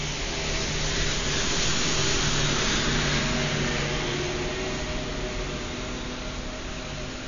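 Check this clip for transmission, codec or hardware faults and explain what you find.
One fault runs throughout: AAC compression. Nothing is heard above 7.1 kHz, so the sound is dull and smeared. A low-bitrate AAC-LC encoder, around 32 kbps, is the likely cause.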